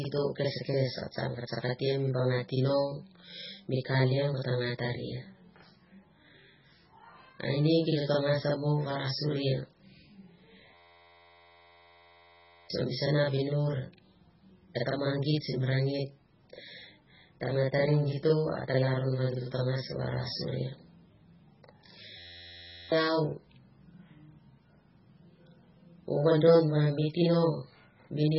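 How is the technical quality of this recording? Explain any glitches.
Technical quality is poor. The speech carries a constant doubling, heavy codec damage and two freezes.

Channel delay (doubling), throughout: one channel arrives about 46 ms after the other. That fits a 2048-sample buffer. When the two are summed, the late copy is heard as a separate slap right behind each syllable, at equal level.

MP3 compression, throughout: nothing is left above 5.6 kHz, so the treble is dull. Weak spectral detail flickers in and out, which gives the speech a watery, swirling quality with smeared consonant attacks. This points to a very low bitrate, likely around 16 kbps.

System hang loop, 10.74 to 12.70 s, ending just before "o mi sana vinur": playback froze while the hardware kept replaying one 11.6 ms slice, which fits a 512-sample buffer. The result is a steady 86 Hz buzz, and about two seconds of speech are lost. 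The same fault returns from 22.19 to 22.92 s, buzzing at the same rate and replacing roughly 0.7 s.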